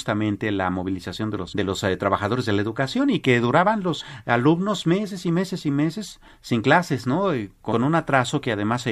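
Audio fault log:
1.51–1.53 s, damaged data in a compressed stream: a brief glitch after "la movilización de", where corrupted frames throw the decoder out of sync until it finds the next header.
4.00–4.02 s, damaged data in a compressed stream: a short blip between "educación y que duraban" and "alumnos meses y meses", where the decoder misreads bad bytes and resynchronises.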